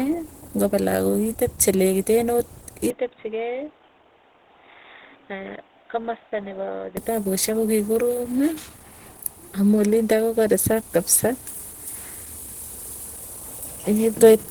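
Opus compression runs throughout: the speech sounds hoarse and grainy, likely from a hybrid-mode encode fitting about 16 kbps, though content still reaches 20.1 kHz.

Input switched to a poorer device from 2.90 to 6.97 s: without any gap, the sound turns dull and cuts off above 3.8 kHz. It drops a little in level and gains faint new background noise, likely from a narrower-band microphone.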